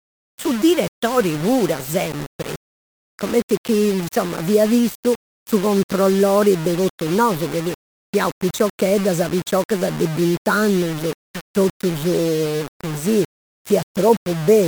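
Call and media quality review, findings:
Grainy, signal-following distortion across the whole speech clip. Quiet passages turn gritty, and the softest sounds sputter or drop out. Likely cause: low bit depth without dither. Plain rounding to what sounds like about 5 bits leaves error only around 15 dB below the signal.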